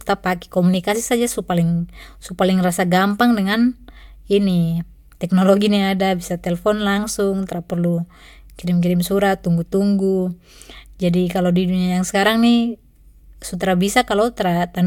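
A speech recording, with no technical fault to point to anywhere in it. There is nothing here that needs a time or a cause.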